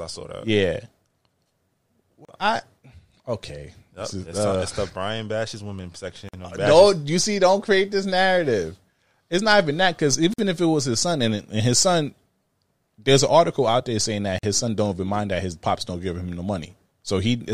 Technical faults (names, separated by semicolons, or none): gap at a join of encoded pieces